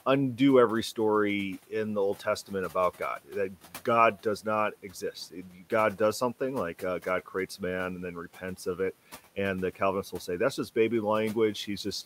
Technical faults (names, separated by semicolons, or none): speech cut by the noise suppressor